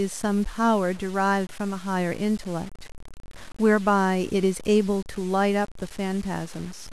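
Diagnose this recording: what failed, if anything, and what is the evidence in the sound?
The speech shows low bit depth without dither across the whole clip, likely from a sample-format conversion that cut the audio to about 6 bits by truncation rather than rounding with dither. The grit rides on the speech itself, roughly 25 dB below it, roughening quiet syllables and decays, while gaps drop to silence or sputter between two steps. That signal-following distortion separates it from dithered low resolution or ordinary hiss, which would leave a steady noise floor in pauses.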